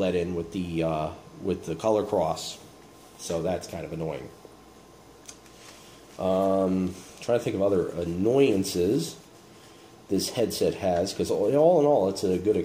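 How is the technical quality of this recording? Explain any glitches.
No glitches turn up anywhere in this recording. Nothing in the audio points to a fault that would need explaining.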